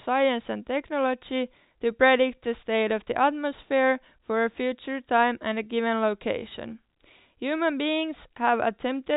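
Speech over a telephone-band path whose content stops near 4 kHz, consistent with G.711 A-law coding, with nothing technically wrong to report.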